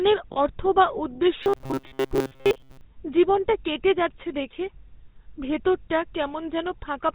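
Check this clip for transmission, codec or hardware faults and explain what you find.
Three faults show up in the speech: GSM full-rate codec coloring across the whole clip, a brief stretch of lost GSM frames near the start, and a longer patch of robotic sound from repeated short buffers.

The GSM full-rate codec damage runs the whole way through and is plainly audible. The codec rebuilds speech from a vocal-tract model driven by a sparse pulse train, and it keeps nothing above 4 kHz. You hear that as a buzzy, gravelly roughness with a dull top end, which fits the 13 kbps full-rate GSM codec.

The lost GSM frames come at 0.32 to 0.38 s, just before "অর্থ বা উদ্দেশ্য". The decoder fills the gap by reusing the last good frame's settings, and the gap's length fits two 20 ms frames. It's short, so it never cuts to silence. It just smears into a quick rough, metallic ring before normal audio resumes.

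The robotic sound from repeated short buffers runs from 1.43 to 2.81 s, between "অর্থ বা উদ্দেশ্য" and "জীবনটা কেটে যাচ্ছে দেখে". This is likely caused by audio arriving too late, so the playback side keeps looping its last short chunk and skips the real material, covering most of that stretch. The loop locks the sound onto a fixed 133 Hz buzz, which fits a repeated chunk of roughly 7.5 ms. The result is a stiff metallic drone that only loosely follows the speech.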